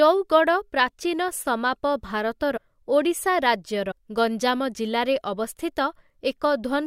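At 2.56 s and again at 3.90 s, compressed frames are skipped. The decoder drops whole 21.3 ms frames, losing roughly 150 ms and then 200 ms of speech, so the speech lurches forward. A spectrogram shows abruptly misaligned harmonics at each join.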